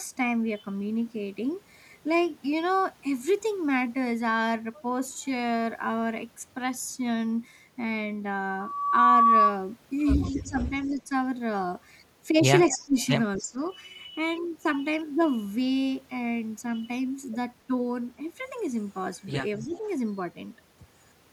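Speech with a loudspeaker feedback squeal from 8.49 to 9.57 s: a 1.1 kHz tone swells over about half a second to roughly 10 dB above the speech, appearing as one bright horizontal line on a spectrogram. Speech suppressed in double talk shows as short dips, roughly 10 to 20 dB deep, at 10.29 to 11.12, 12.69 to 12.98, 13.38 to 13.58 and 19.65 to 19.84 s, visible as pinched waveform envelopes, likely from an echo canceller ducking during overlap. An echo leak, likely from incomplete cancellation, adds a faint-to-moderate copy 260 ms late at 10.85 to 10.89, 12.69 to 13.43 and 19.56 to 19.78 s, seen as shifted repeats of speech patterns.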